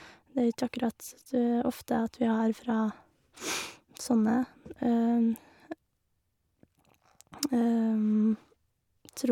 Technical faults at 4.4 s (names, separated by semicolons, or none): none